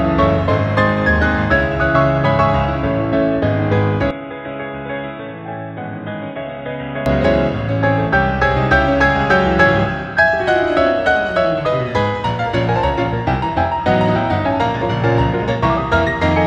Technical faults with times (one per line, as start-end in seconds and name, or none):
4.11-7.06 input switched to a poorer device